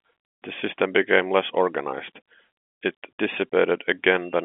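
No faults can be heard.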